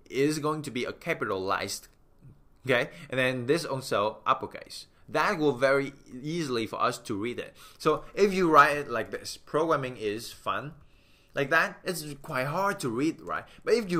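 No technical faults can be heard anywhere here.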